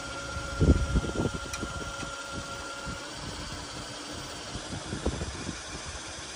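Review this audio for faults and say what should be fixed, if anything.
A drift correction step starts at 4.56 s and lasts to the end of the clip: playback suddenly runs about 6.2% fast, lifting pitch about 104 cents, roughly a semitone sharp. Speed and pitch move together, as when clock-matching software likely jumps the rate at once to rebalance its buffer. Preventing it means letting the resampler adjust rate in small, gradual increments, or sharing one clock between devices.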